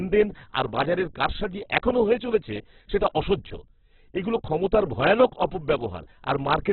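A speech clip with Opus compression damage throughout: the sound is narrow, rough and grainy, with nothing above 4.4 kHz. A spectrogram shows energy ending flat at that line, with smeared, noise-filled bands. This likely comes from Opus's music (CELT) mode at a very low bitrate, around 8 kbps.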